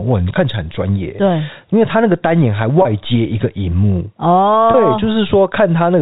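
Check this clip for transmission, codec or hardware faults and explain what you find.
Two brief dropouts in the speech, both packet loss with pitch repetition, heard over the narrowband G.711 telephone sound, whose 4 kHz ceiling is just the format.

The gaps fall at 2.82 to 2.85 s and 4.71 to 4.74 s, each about 30 ms, which fits a single lost packet. The receiver had nothing to play, so it looped the last pitch period of the voice to fill in. At this length there's no fade to silence, just a short, slightly held, buzzy stretch before normal speech picks back up.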